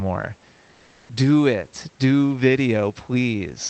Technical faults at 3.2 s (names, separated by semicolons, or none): none